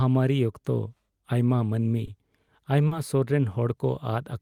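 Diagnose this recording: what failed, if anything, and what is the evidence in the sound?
The network stage dropped audio packets, and the receiver's decoder hid each gap with short concealed packet loss. Around 2.05 to 2.09 s about 20 ms of speech never arrived, and around 2.87 to 2.93 s about 40 ms went missing. In each hole the decoder extended the preceding sound, carrying its pitch forward or substituting shaped noise, then crossfaded into the real signal again. The result is a brief smear or wobble at each point, longer at 2.87 s.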